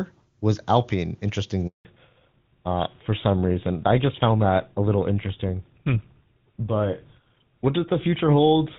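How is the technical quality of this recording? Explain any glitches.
The recording has two linked faults: a brief dropout, then a lasting loss of high-frequency detail in this speech.

From 1.67 to 1.85 s there is a handover gap of 180 ms. The call was switched between networks and no speech frames arrived, so the sound fades within milliseconds into true silence. Unlike packet loss, there is no concealment buzz or repeated fragment, just clean dead air.

From 1.85 s to the end there is a fallback to narrowband. The call dropped from the HD Voice codec to an older narrowband one, and nothing above 4 kHz remains. The speech turns duller and rougher. A simple low-pass filter would lose the top without adding that grainy, harsh texture, which points to an older codec such as GSM full rate.

Before the gap, the AMR wideband (HD Voice) codec carries the speech with little or no audible codec damage, which fits its highest bitrate.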